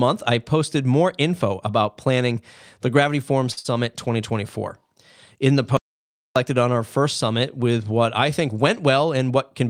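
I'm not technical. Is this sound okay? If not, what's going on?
No. At 3.51 s there is a short stall from a late packet. Speech travels over the network in small chunks, and one arrived late, so the receiver had nothing new to play. To cover the gap, it stretched the last bit of sound by about 55 ms until the chunk showed up. Nothing is lost, but a sound is briefly held too long, with a faint buzz or dip, before the speech carries on.

Right after, from 3.59 to 3.66 s, comes a burst of packet loss. This time the chunks never arrived in time. The receiver again filled about 54 ms by continuing the last sound and letting it fade, then jumped ahead. About 60 ms of speech is missing, heard as a short held buzz or hiss followed by a small skip.

From 5.77 to 6.36 s there is an audio dropout to silence. The incoming audio was cut off, likely by a brief mute or a loose connection, and the recording filled the gap with dead silence. 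For about 0.6 s there is no sound at all, not even the room's background. Speech resumes abruptly with "on our first summit", and whatever was said during the gap is gone.

From 9.04 to 9.63 s, just after "with what I think", there is a jitter buffer speed-up. The receiver had built up more waiting audio than it wanted. To catch up, it trimmed many tiny slivers from the speech, adding up to about a twentieth of a second. The speech plays about 6% faster at the same pitch, so this stretch sounds slightly hurried.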